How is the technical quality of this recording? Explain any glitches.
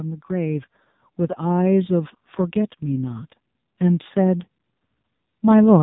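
Technical quality is poor, with two problems stacked together.

The whole clip has heavy AMR narrowband mobile codec damage. Nothing gets through above about 3.8 kHz, and the vocal-tract model, starved of bits, makes the voice buzzy and synthetic. That points to a very low bitrate, around 6 kbps.

From 0.27 to 4.45 s there's automatic gain rising. The gain control decided the input was too quiet and slowly pushed it up by about 7 dB, so voice and background swell together over roughly four seconds. The call's microphone high-pass trimming the deepest bass is normal and not part of the problem.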